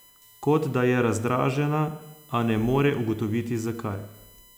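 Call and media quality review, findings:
USB whine, throughout: bus frame current at 1 ms leaking via power or ground. Fixed-pitch whine at 1 kHz with harmonics, strongest near 13 kHz, roughly 30 dB below speech.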